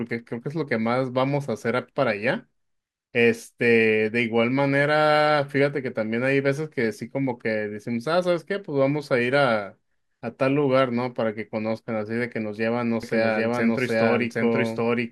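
A doubled audio track starts abruptly at 13.03 s and runs to the end of the clip. From that point the speech is heard twice: a second, full-band copy trails the first by roughly 0.7 s at about the same loudness. The copy has no decay or room colour, so it sounds like a clean repeat rather than an echo. The cause is likely a second capture through a slower path, or an edit leaving two misaligned copies.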